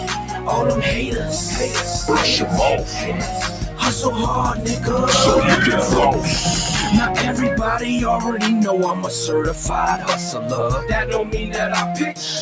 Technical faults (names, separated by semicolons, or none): sound cut by the noise suppressor